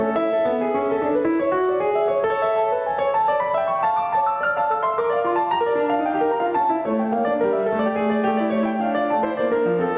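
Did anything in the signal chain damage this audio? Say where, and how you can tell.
Yes: gain pumping throughout, likely from input gain set too high into a fast limiter. The music ducks around 10 dB under loud hits, then swells back.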